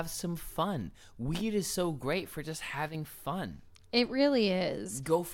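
Just after "so great for just", from 2.89 to 2.95 s, the speech abruptly dips by about 6 dB for 60 ms, then snaps back. This is likely one channel drops out: one stereo side vanishes briefly, halving the shared signal in the mono sum.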